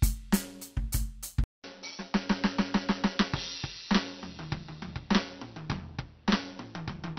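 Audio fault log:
throughout: overlap-add ripple. The music has a metallic buzz with extra tones around each note, from a ripple of about 6 dB near 150 Hz, because frames were rejoined with overlap that doesn't sum evenly.
1.44–7.18 s: input switched to a poorer device. After a 200 ms silence the music turns dull, about 5 dB quieter, with faint new noise. This is likely a change to a narrower-band input.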